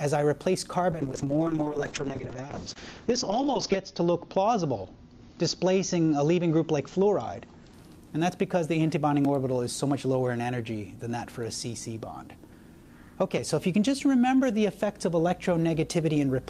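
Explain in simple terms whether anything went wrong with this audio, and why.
From 0.93 to 7.79 s there is a call bitrate drop. Given far fewer bits, the sound turns rough and muffled, losing everything above 8 kHz, then clears.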